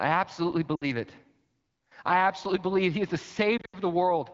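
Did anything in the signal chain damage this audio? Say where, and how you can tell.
Yes. On the radio network link, lost AMR speech frames forced the wideband decoder to repeat its last good pitch and vocal tract settings at falling gain. The sound smears and dips for 60 ms at 0.75 to 0.85 s. From 3.58 to 3.76 s, 120 ms of scattered losses produce dropouts that fall to near silence within two frames.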